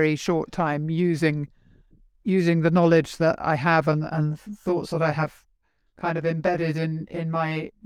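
Speech. From 3.93 s to 7.86 s, just after "knowledge that I have", one channel runs around 20 ms late, causing channel delay (comb filtering) in the mono sum: evenly spaced notches start near 30 Hz and make the sound rough and slightly doubled.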